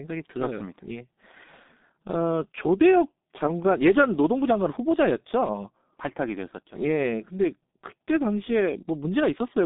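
Speech runs through the G.723.1 codec for its whole length, with nothing above 3.8 kHz and a line band of about 200 Hz to 3.7 kHz. Unlike plain telephone filtering, the heavy hoarse smearing and blurred consonants fit a roughly 6 kbit/s coder updating its voice model only every 30 ms.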